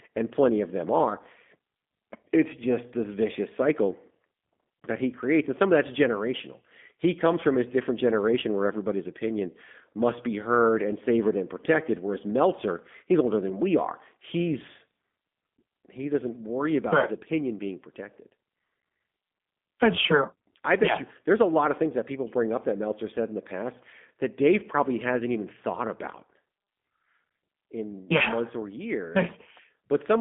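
Throughout, the speech has been squeezed through a G.729 codec, which fits the G.729A variant at 8 kbit/s. It resynthesises each frame from a modelled filter and sparse pulses, so the speech sounds plainly gritty and artificial, confined to a 150 Hz to 3.5 kHz band, with nothing above 3.7 kHz.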